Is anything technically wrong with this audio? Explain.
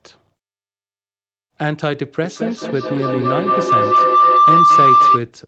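Yes. There is a feedback howl from 2.24 s to 5.29 s. A tone near 1 kHz rises out of the speech, with the loop repeating roughly every fifth of a second. At its loudest it sits about 9 dB above the talker. Two devices were joined to the call in one room. Each trip from loudspeaker to microphone added gain, so the repeats grew instead of dying away. The loop's favoured frequency took over. The audio also stops at 8 kHz, which fits a wideband call codec.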